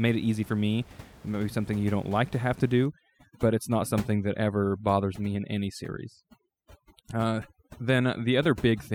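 Speech, with overdone noise removal from 2.86 s to the end: a noise reducer set far too strong cuts frequency bands near its noise estimate, leaving a background that drops and breaks up into twinkling specks. Before that, room noise sits about 21 dB below the speech.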